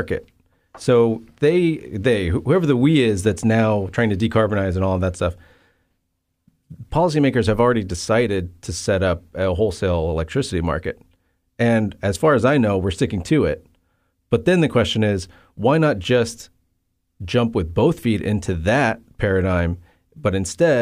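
No technical faults can be heard anywhere in this recording.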